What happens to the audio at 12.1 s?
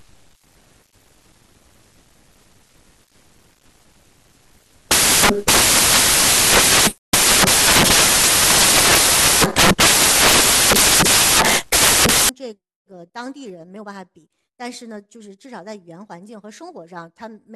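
Samples built from the wrong bytes, running from 0.00 s to 12.29 s, so 12.1 s falls just before the fault ends. Each sample's bytes are being assembled incorrectly, whether offset by a byte, in swapped order or under the wrong alignment, so the rapidly fluctuating low bits end up as the dominant part of every value. At 12.1 s it is heard as loud, harsh broadband noise.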